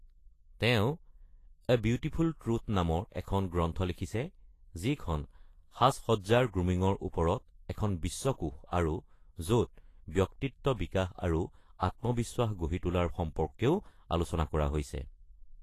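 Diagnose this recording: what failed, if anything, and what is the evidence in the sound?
Throughout the speech, the treble stops at 14.2 kHz and sounds hissy and grainy. This is likely Vorbis compression at a low bitrate, around 31 kbps, coarsely quantising the residue.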